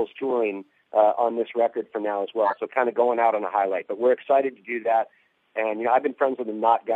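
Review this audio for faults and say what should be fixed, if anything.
A short, loud chirp or burst of noise comes out from 2.44 to 2.58 s, peaking around -5 dBFS: a corrupt frame was decoded, roughly two compressed frames with flipped bits. Adding error detection with concealment, so damaged frames are muted or replaced rather than played, would prevent it.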